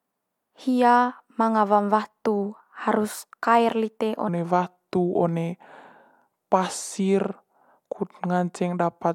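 A speech clip with a section at the wrong speed. After "watu harus kaer lite", from 4.29 s to the end at 9.15 s, playback runs at 0.81 times normal speed. The voice drops about four semitones and drags. It was likely fitted to the wrong clock.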